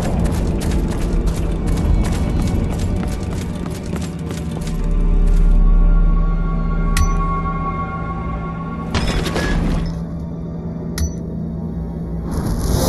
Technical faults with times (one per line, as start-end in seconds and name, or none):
9.85-12.88 channel delay (comb filtering)